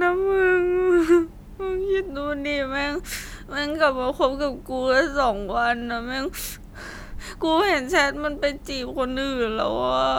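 Listening to the recorded speech turned up nothing that stood out as a technical problem.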